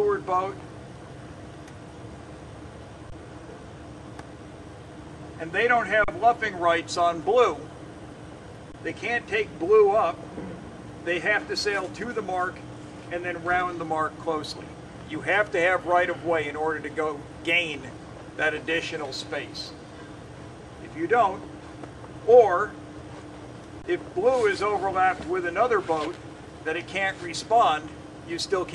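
The sound freezes into a flat hold four times, at 3.10 to 3.12 s, 6.04 to 6.08 s, 8.72 to 8.74 s and 23.82 to 23.84 s. The stops are 20 ms long except the 40 ms one at 6.04 s. Each is an underrun with held sample: the output buffer ran dry, and the converter kept its last value until data came back. The sound stops with little or no click, and playback picks up where it left off with no audio apparently lost, so each restart is soft.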